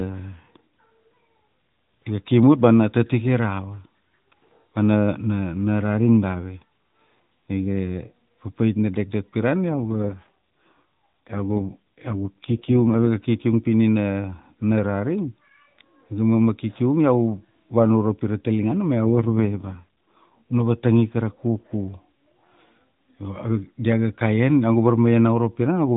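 At 9.70 to 13.07 s and again at 19.05 to 20.32 s, an AMR rate drop has the codec shift bits from the speech model to error protection, which fits a fall from 12.2 to 4.75 kbps. The band stays the same and nothing drops out, but the speech turns buzzier and more synthetic until the rate recovers.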